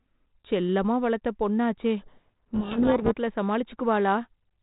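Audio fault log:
2.00 to 3.13 s, codec payload misread: right after "செல்லமா வளர்த்த பொண்ணாச்சே" the speech is buried in harsh, rasping distortion for about 1.1 s. This fits G.726 code words decoded with their bits in the wrong order. Each sample's difference value comes out wrong and pushes the adaptive predictor off course. The noise stays band-limited like the lightly coloured telephone audio around it, which suits 32 kbit/s G.726, and clears once both ends agree on the packing.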